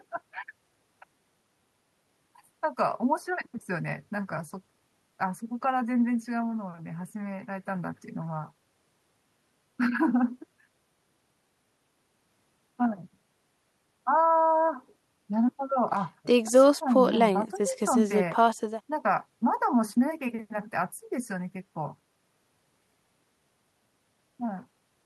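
The speech recording carries no audible technical faults at any point, with the signal continuous and intact throughout.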